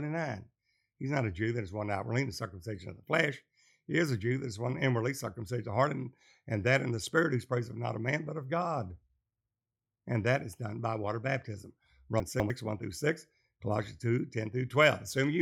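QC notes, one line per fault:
12.2–12.5 s, chunks out of order: just after "done by water baptism", a 100 ms piece of audio plays two chunks late, after the 200 ms that should follow it. The passage comes out jumbled, with three hard joins. Nothing is missing and nothing repeats, which sets this apart from a dropout or a stutter. Every fragment is present once, just in the wrong sequence, so the timing sounds scrambled rather than gapped or doubled.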